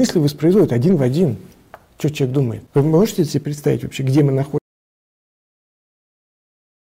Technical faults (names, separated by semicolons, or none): one channel drops out; audio dropout to silence